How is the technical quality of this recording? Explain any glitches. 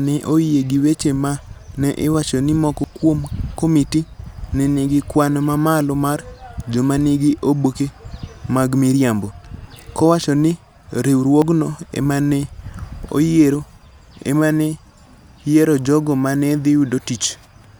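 The speech has three audible glitches. At 2.84, 7.66 and 11.42 s the sound jumps forward, skipping roughly 40, 70 and 20 ms. This is likely a dropped buffer (overrun), where unread audio was overwritten and the surrounding sections were spliced together with no gap.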